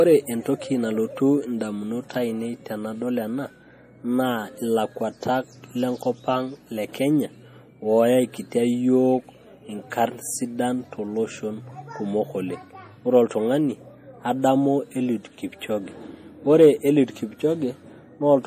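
From start to finish the speech carries plainly audible MP3 compression damage, likely from encoding at a low bitrate, which fits something around 40 kbps. Nothing remains above 15.2 kHz, and weak detail flickers in and out, giving a watery, swirly texture with metallic chirps on s sounds and smeared onsets. A simple low-pass filter would dull the treble just as evenly but without that shifting, bubbling grain.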